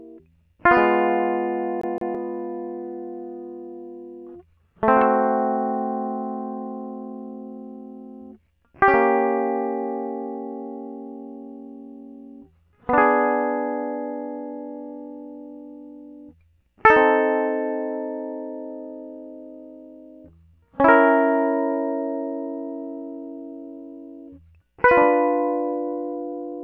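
CD stuck on one turn, from 1.81 to 2.15 s: the music catches on a single slice of about 167 ms and plays it twice in quick succession, with a brief mute at each jump back. A scratch on the disc makes the laser lose its place and fall back one track at the same point of the rotation, so the same short fragment returns at an even rate. The result is the quick, mechanical stutter of a skipping CD.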